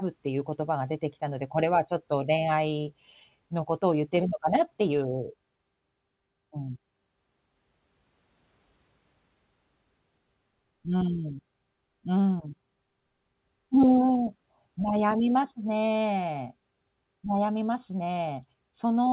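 No technical faults can be heard in this recording.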